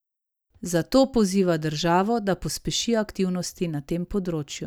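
No faults are audible anywhere in this speech recording.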